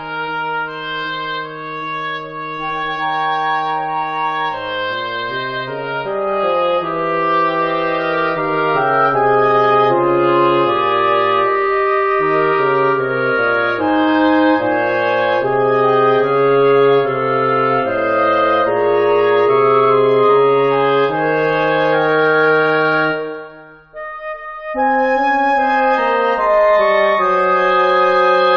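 Nothing in the audio stands out as a technical fault, so there's no problem to point to here.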